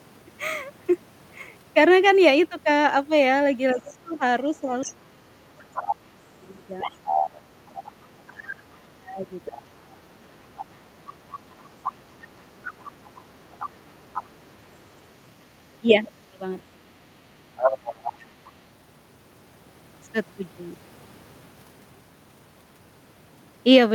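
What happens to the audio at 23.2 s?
Nothing goes wrong at 23.2 s; the speech carries on intact through that moment with no fault to be heard.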